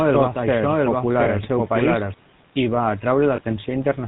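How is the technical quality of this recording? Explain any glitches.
The recording is degraded by telephone-codec coding throughout, with an echoing second copy early on and two brief dropouts.

GSM full-rate codec: Across the whole clip, speech is band-limited below 4 kHz with plainly audible buzzy, gravelly roughness, consistent with GSM full-rate coding at 13 kbps.

Doubled audio track: From the start to 2.14 s, a second full-band copy trails roughly 0.7 s behind at about equal level, then stops abruptly. This is likely a duplicate capture path.

Lost GSM frames: At 1.24–1.28 s and 3.36–3.41 s, the decoder holds the previous frame's settings, producing a short metallic ring that fits a single lost 20 ms frame each time.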